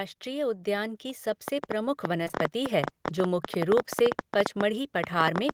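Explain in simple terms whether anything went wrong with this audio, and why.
Automatic gain rising, from 0.23 to 1.09 s: near the start, the recording gets steadily louder over a little under a second. The device's automatic volume control judged the incoming sound too quiet and turned itself up gradually, so the speech and the background noise behind it swell together. The rise is modest, enough to notice the level creeping up rather than jumping.

A train of clicks, from 1.48 s to the end of the clip: a run of sharp ticks sits on top of the sound, about nine per second, at an uneven pace rather than a steady beat. They are loud, standing well above the speech, and carry on through pauses too. The most likely cause is electrical interference from nearby equipment or a faulty connection or power supply, injecting similar-shaped pulses into the signal.

Short concealed packet loss, three times in a row at 2.23, 2.28 and 2.31 s, ending at 2.35 s: over about a tenth of a second, three small pieces of the call, each 20 ms long, arrived too late to play. 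The receiver covered each gap by stretching out the sound just before it, for 24, 15 and 13 ms, then blended back into the real audio. The result is a brief smeared, wobbly patch where a quick sound can get lost.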